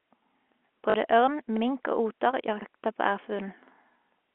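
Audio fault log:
0.90–0.94 s, packet loss with last packet repeated: Just before "ørn mink og oter", about 40 ms of audio went missing. The receiver filled the gap by replaying the last good block, and the spacing fits two 20 ms packets. Each replay restarts out of step with the pitch cycle. The repeats form a brief 50 Hz buzz, heard as a short robotic stutter over the narrow telephone band.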